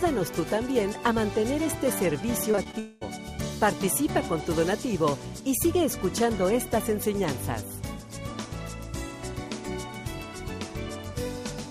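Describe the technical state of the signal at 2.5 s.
Repeated packet loss runs from 2.51 to 2.75 s: four short gaps, the longest about 19 ms, were each patched by extending the preceding sound, so roughly a third of that stretch is concealment. The audio turns choppy and robotic, with fragments missing.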